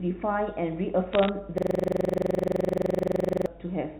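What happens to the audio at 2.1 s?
At 2.1 s you're in the middle of a system hang loop, running from about 1.58 s to 3.47 s. The machine froze while the sound hardware kept replaying one 42.7 ms chunk, which fits a 2048-sample buffer. It repeats dozens of times at 23.4 Hz, a rapid buzzy stutter.

Underneath that there's mains hum, a steady 50 Hz tone from a ground loop or nearby transformer picking up the power line. It runs through the whole clip at roughly 25 dB under the signal, a low drone.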